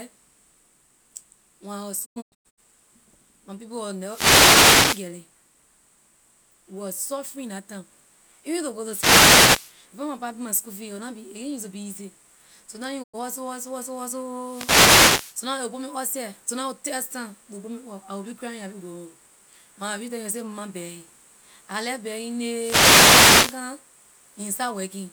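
Speech that twice cuts to silence with quick 20 ms fades: at 2.04–2.60 s it breaks into several short holes, about 352 ms lost across roughly half a second, the longest 96 ms, and at 13.02–13.16 s one 96 ms gap. This is digital broadcast dropout, where corrupted or missing frames make the receiver mute until good ones return. Short swishes of static also rise over the speech at 3.99–5.13 s, 8.76–9.83 s, 14.38–15.44 s and 22.51–23.66 s. These are wireless microphone noise hits, where reflections cancel the FM radio signal and receiver noise swells up.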